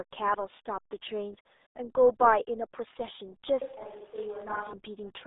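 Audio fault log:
Throughout: RealAudio 14.4 codec. The whole clip has passed through this early 8 kbit/s speech codec, built for dial-up modems. Nothing above 3.8 kHz survives, and the useful band runs from roughly 300 Hz to 3.7 kHz, like a telephone line. The codec damage is heavy. Speech sounds muffled and gargly. The tiny bitrate cannot describe the waveform finely, so the speech is rebuilt coarsely.
3.62 to 4.73 s: switch to a distant microphone. The speech suddenly turns roomy and hollow, loses bass, and drops about 5 dB in level. Room noise sits at roughly 25 dB below the speech. At 4.73 s the close, fuller sound returns just as abruptly. The likely cause is that the close microphone's signal dropped out and a farther one, such as a camera microphone, filled in.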